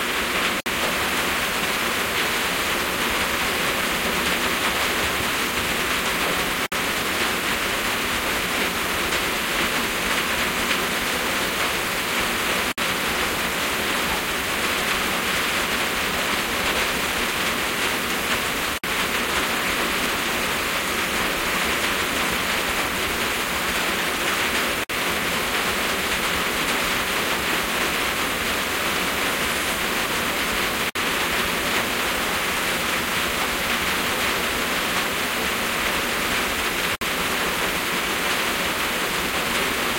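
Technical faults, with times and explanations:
0.60, 6.66, 12.72, 18.78, 24.84, 30.90, 36.95 s, gap at a join of encoded pieces: 6-second pieces joined untrimmed leave encoder delay and padding, opening roughly 58 ms silences with edges smeared by the codec before the sound resumes.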